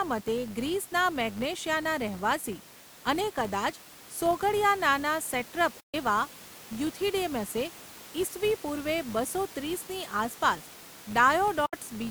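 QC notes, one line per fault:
Throughout: filter restarted on every block. There's a steady 100 Hz buzz riding under the speech. It comes from a filter that forgets its state at each block boundary and starts again from silence, so every block opens with a tiny transient. Those clicks repeat at the block rate and fuse into a buzz, and it gets louder and softer with the speech because each transient scales with the signal level. The room noise sits about 20 dB below the speech, and the buzz is separate from it.
5.80–5.94 s and 11.66–11.74 s: digital broadcast dropout. The sound fades out over about 8 ms and goes silent, for 128 ms in the first hole and 64 ms in the second. It picks up again with "એવા યુથિડેમસે ઇસવી પૂર્વે" after the first. This is the receiver muting while good frames were missing, which fits four and two 32 ms frames. Whatever was transmitted during those gaps is gone, not just quieter.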